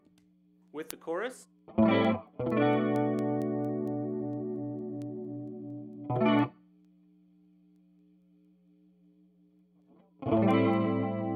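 The audio carries word clock ticks from 0.22 s to 11.19 s: sharp clicks of uneven strength, about every fifth of a second, roughly fifty in all. The receiving device's clock runs around 100 ppm off the sender's, so each slip drops or repeats one sample.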